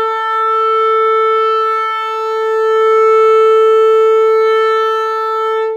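No dropouts, distortion or other faults can be heard anywhere in this music.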